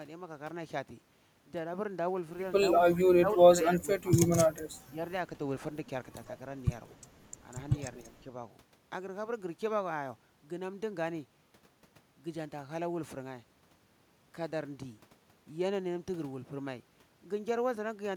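From 2.81 to 4.29 s the speech sinks by as much as about 20 dB, in patches adding up to roughly a second. This is speech suppressed in double talk. Both ends were likely talking at once, so the echo canceller turned the near voice down. Shorter dips of about 10 dB follow at 4.89 to 4.99 s and 8.0 to 8.28 s, likely for the same reason. At 6.9 to 6.96 s a brief echo leak appears. A faint copy of the voice returns about 226 ms late, roughly 35 dB below the speech, likely from a loudspeaker echo the canceller missed.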